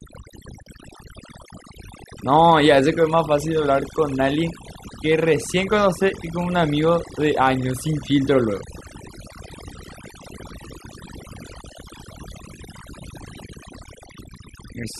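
From start to finish the gaps between phrases fall to near silence scattered with twinkling specks. This is overdone noise removal: a noise reduction process set far too aggressively. Wherever a frequency band sits close to its estimate of the background noise, it pulls that band right down or shuts it off, so quieter parts of the voice are stripped away along with the noise.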